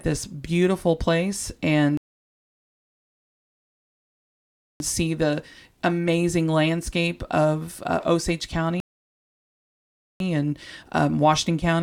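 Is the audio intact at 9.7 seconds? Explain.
No. At 9.7 seconds you're right in the middle of a rebuffering stall that runs from about 8.80 to 10.20 s. The player ran dry of downloaded audio, so the speech just drops to silence and sits there until enough data arrives, then picks up exactly where it stopped. Nothing gets skipped, but the gap stretches the timeline by roughly 1.4 seconds, so everything after it lands that much later.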